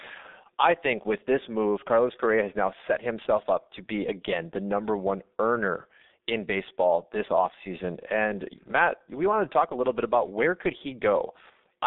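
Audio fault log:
Throughout: G.723.1 codec, heavy damage. At 6.3 kbit/s, its long frames and slowly updated voice model blur consonants and roughen the speech, and nothing passes above 3.8 kHz.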